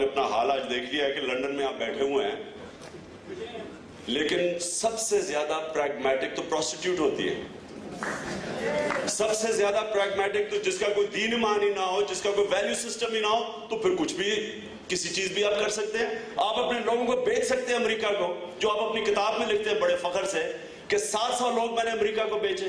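Nothing stood out as a problem on listening.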